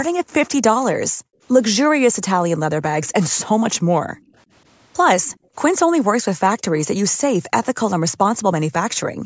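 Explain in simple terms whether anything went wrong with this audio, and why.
Four times the room sound behind the speech suddenly dips or vanishes for a moment: from 1.11 to 1.42 s, 4.12 to 4.35 s, 5.31 to 5.54 s, and from 9.11 s to the end. This is background gated by the echo canceller. While the far side played through the loudspeaker, the call software turned the microphone down hard.

Around 5.25 to 5.38 s a very faint, delayed copy of the talking slips through, trailing the original by about 0.18 s. This is most likely an echo leak: the echo canceller didn't remove all of the loudspeaker sound the microphone picked up, and that leftover was sent back.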